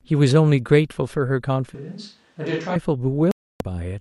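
From 1.75 s to 2.76 s the close microphone's feed appears to have dropped out, most likely with the recording falling back to a microphone much further from the talker, such as a camera's. The speech abruptly turns roomy and hollow, thins in the bass, and sits roughly 10 dB lower, with a faint room noise floor some 35 dB below it now audible. This switch to a distant microphone reverses just as suddenly at 2.76 s.

At 3.31 s the receiver lost the digital broadcast signal, or its frames stopped passing their checksum, so it muted output until valid frames arrived again at 3.61 s. This digital broadcast dropout leaves a clean 0.29 s hole of silence, consistent with about a dozen consecutive frames being discarded. Whatever was transmitted in that gap is gone, and the sound resumes with no fill.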